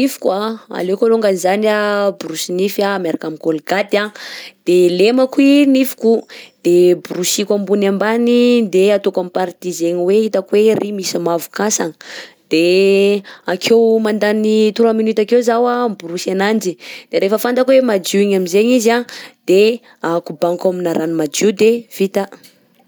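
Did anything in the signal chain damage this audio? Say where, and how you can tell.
No, nothing in this speech recording points to damage at any stage of the signal chain. There are no dropouts, clicks, level jumps, or gaps anywhere in the clip.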